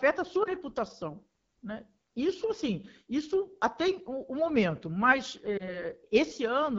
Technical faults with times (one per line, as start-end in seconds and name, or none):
0.00-6.79 AMR wideband (HD Voice) codec
0.43-0.48 lost AMR speech frames
5.57-5.84 lost AMR speech frames